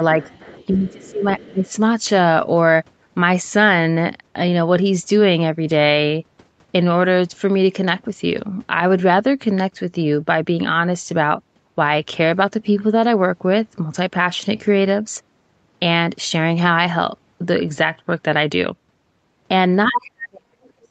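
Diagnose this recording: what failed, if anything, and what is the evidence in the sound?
Call processing, other side's voice leaking through: far-end sound at 0.21–1.1 s and 1.4–1.47 s, about 25 dB down, likely loudspeaker echo the canceller left behind.

Call processing, speech suppressed in double talk: the talker dips at 0.23–0.29, 0.69–1.24 and 1.47–1.7 s, and from 19.88 s to the end, by as much as about 40 dB. This is likely the echo canceller attenuating both voices while they overlap.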